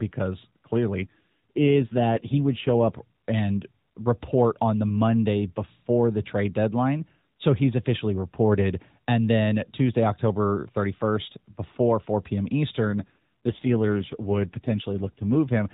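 From 1.02 to 3.01 s, ending just before "and report on the", and again from 12.86 to 15.36 s, the speech turns rougher and more synthetic with no gap or band change. That is an AMR rate drop, consistent with the narrowband codec stepping down from 12.2 to 5.9 kbps.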